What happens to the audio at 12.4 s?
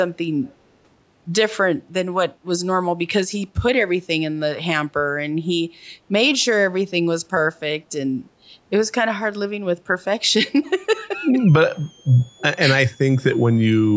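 A switching power supply runs in an audible burst mode or beats with another supply from 11.48 s to the end of the clip. This adds a switching supply whistle about 30 dB below the speech, a high tone wandering between about 3.0 and 3.6 kHz that sits over the moment in question.

From 12.38 to 12.43 s there is a short echo leak, likely from an echo canceller on a loudspeaker end letting part of its microphone pickup through. It is heard as a brief scrap of the speech repeated 286 ms late, about 25 dB down.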